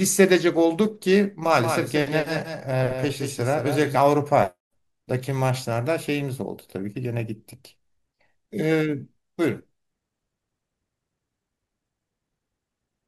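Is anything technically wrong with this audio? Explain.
Yes. From 1.58 to 3.96 s the speech has a doubled audio track. A second full-band copy trails the original by around a fifth of a second, somewhat quieter (roughly 5 dB down), with no reverb tail or room colour. It most likely comes from a second capture path or an edit holding two misaligned copies. It sounds like a dry slapback stutter that starts and stops abruptly. On a spectrogram every syllable has a fainter duplicate shifted right, and the waveform shows offset repeated envelopes.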